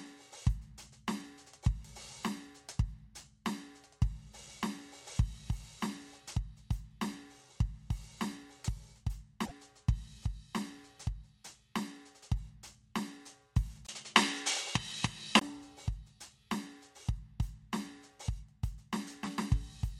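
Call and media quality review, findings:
Broken MP3 bit reservoir, 9.45 to 9.52 s: the music skips forward with a short glitch spanning about 70 ms, roughly three 26.1 ms frames. The likely cause is missing frames, whose successors read another frame's reservoir bytes. A decode garble and a time jump, not a concealment smear.

Input switched to a poorer device, 13.87 to 15.41 s: a 20 ms silence, then the band ends at 11.4 kHz, the level shifts by about 5 dB, and a new noise floor sits around 35 dB under the music. The likely cause is a change of capture hardware. Noise and level change with the band, unlike a codec bandwidth drop.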